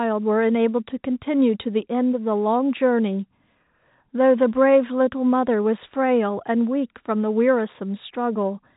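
No faults can be heard anywhere in the speech.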